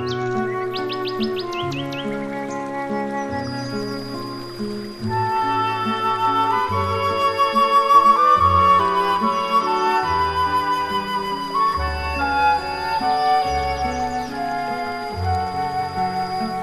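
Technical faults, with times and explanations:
3.33–16.62 s, feedback whistle: a 4.9 kHz tone sits roughly 20 dB under the audio, likely a loudspeaker-to-microphone loop near instability; spectrogram shows one thin horizontal line.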